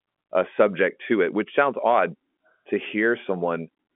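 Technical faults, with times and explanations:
Nothing to flag here: the speech comes over an ordinary G.711 telephone line, so it sits in the usual narrow phone band with nothing above about 3.7 kHz, and that's simply how such a line sounds rather than anything going wrong.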